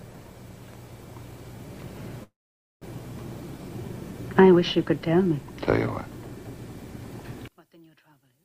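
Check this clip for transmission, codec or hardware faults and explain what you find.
Two faults are present, a gap inserted mid-clip and a collapse in level at the end.

From 2.23 to 2.85 s there is a call audio freeze. The sound stops and the last moment is stretched into a short fading continuation, then about 0.51 s of silence, before the audio picks up exactly where it left off. The likely cause is packets held up in transit, so the jitter buffer ran dry and the receiver filled about 0.58 s on its own. Everything after is shifted later by that amount, with nothing missing.

From 7.48 s to the end, the level drops by about 37 dB, leaving only a small residue of the sound with the background gone as well. This is one channel inverted. One stereo channel likely had its polarity reversed, so summing to mono cancelled everything common to both channels and left only their mismatch.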